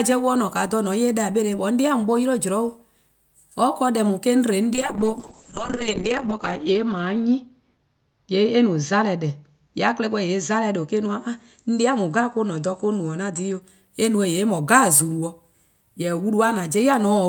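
Speech with a call bitrate drop from 4.74 s to 13.67 s. As bandwidth estimation falls, the sound turns coarse and watery and loses its top, cut off near 8 kHz. That points to the encoder falling from about 48 kbps to roughly 7 kbps before recovering.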